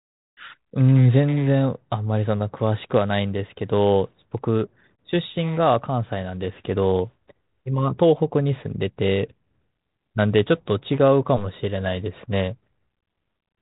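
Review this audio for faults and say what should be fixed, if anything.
Nothing to fix: no faults are present, and the speech sits on a G.726 ADPCM path at 32 kbit/s with its band ending near 3.8 kHz and only light coding damage, as expected for that link.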